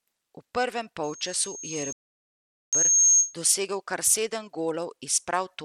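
From the first second to the last, the speech has a gritty, coarse edge. The treble is thin and flickers in and out, and a hashy noise rides on the sound. This damage is plainly audible. It likely comes from Bluetooth SBC compression. SBC splits the sound into a few wide bands and shares out a small pool of bits. The top bands get too few bits. The result fits a rate of around 96 kbps.

At 1.03 s a loudspeaker feedback squeal begins. A single tone near 6.5 kHz swells over roughly two seconds. At its peak it sits about 10 dB above the speech. A microphone is hearing the loudspeaker it feeds. At this one frequency the loop gain passed one, so the tone kept feeding itself. It stops at 3.35 s, just before "dosegel kar".

Inside the squeal, at 1.93 s, everything goes silent. The gap lasts about 0.8 s, until 2.73 s, and then the sound carries on. This is a playback stall. The likely cause is that the player ran short of data or its thread was held up, so the output had nothing to play. 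The squeal drops out along with the speech during the gap, then returns.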